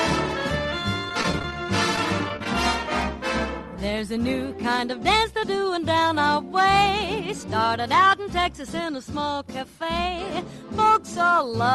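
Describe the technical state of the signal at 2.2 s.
At 2.2 s the sound turns choppy, with tiny pieces dropping out between about 1.96 and 2.46 s. This is repeated packet loss: several short gaps, the longest about 16 ms, were each bridged by extending the preceding sound.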